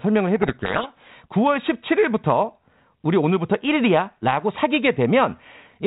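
From 0.36 to 1.08 s the speech is buried in harsh, grinding distortion. This is a codec payload misread: the decoder takes each G.726 code word with its bits in the wrong order. Unlike the rasping hiss of low-bitrate G.726, it starts and stops abruptly.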